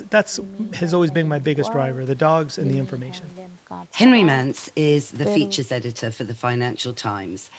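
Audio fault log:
No faults detected in this speech.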